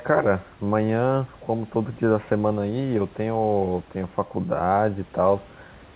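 No technical faults can be heard anywhere in this speech.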